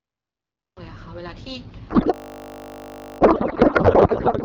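The file opens on digital silence. Sound only begins at 0.77 s, and it begins abruptly, partway through a sound. This is a cut-off start. The recording or stream started late, so the opening has no natural attack or fade-in. The entry is a hard edge, heard as a jump from nothing straight into the middle of the sound.

At 1.89 s the speech turns to garbled noise and warble. This lasts to the end of the clip. It is a codec payload misread. The decoder keeps receiving frames that look valid, but it reads their fields from the wrong bit positions. The sound points to octet-aligned AMR being unpacked as bandwidth-efficient. The output barely tracks the speech underneath. Before 1.89 s, the wideband AMR coding sounds clear, which fits a rate around 12.65 kbit/s.

From 2.14 s to 3.2 s, a system hang loop sits inside that garbled stretch. The computer or driver stalled while the audio hardware kept cycling one buffer. 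A single 20 ms slice repeats roughly fifty times. At that length the repeats merge into a steady 50 Hz buzz rather than a stutter. When the loop releases at 3.2 s, the sound resumes where it left off, with essentially nothing skipped. It picks up in the same garbled state.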